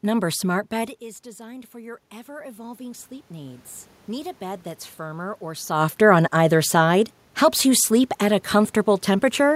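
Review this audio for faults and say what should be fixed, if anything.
From 0.74 s to 5.79 s there is automatic gain rising. The talker moved away around 1 s, and the input dropped by about 15 dB. The gain control then climbed slowly, by about 8 dB. Voice and room noise swell together until "on either side". The talker moves again near 5.5 s. To prevent this, fix the gain and keep the talker at a steady distance.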